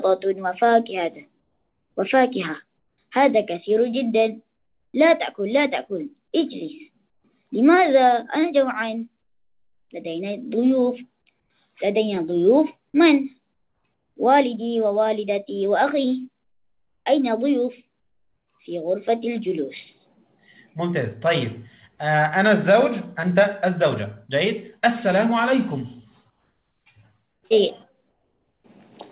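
Comfort noise in place of the background at 1.4, 2.78, 4.56, 7.1, 13.54, 26.3, 27.32 and 28.1 s, each lasting 0.12 to 0.56 s. In these quiet gaps the real background gives way to a steady, featureless hiss. It is about 3 to 13 dB quieter, except at 4.56 s, where it is about 3 dB louder. The likely cause is discontinuous transmission: the sender goes silent during pauses and the receiver fills them with synthetic noise. Like the rest of the sound, the hiss stops at 4 kHz because of the call codec.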